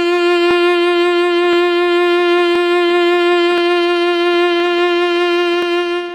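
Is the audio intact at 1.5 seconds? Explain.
No. From 1.53 to 1.56 s, overlapping chunks replay about 23 ms of the music at a chunk join, heard as a brief stutter or click.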